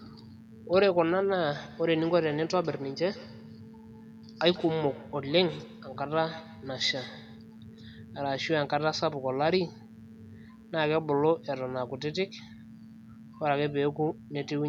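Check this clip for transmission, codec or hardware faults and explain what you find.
Two faults are present in the recording.

Mains buzz runs throughout. Switching spikes from 60 Hz mains add harmonics up into the kilohertz range, giving a steady raspy buzz about 35 dB below the speech.

From 1.52 to 7.49 s there is feedback echo between two devices. One device's playback re-enters another's microphone, so speech returns roughly every 150 ms, thinner and ringing, peaking about 20 dB below the direct speech.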